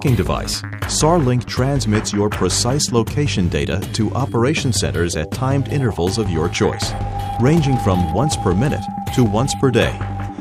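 Sample clock jitter runs through the whole clip. The converter's timing wanders by around two microseconds, so each sample lands a little early or late. Where the waveform changes fastest, that small timing slip becomes a sizeable amplitude error, sitting roughly 35 dB below the signal. The result is a grainy hiss that swells on loud, bright passages and drops away entirely in silence.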